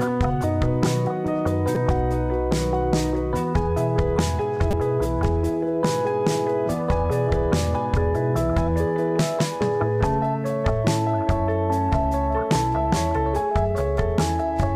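At 1.75 s there's a repeated buffer. New audio didn't reach the output in time, so the device replayed its last chunk twice more. Each chunk seems to be about 5 ms, so this lands as a quick click or buzz rather than an obvious stutter, with roughly 10 ms of real audio dropped. At 4.71 to 4.73 s it happens again, this time with four extra plays. That gives a slightly longer buzzy burst and about 20 ms of lost material.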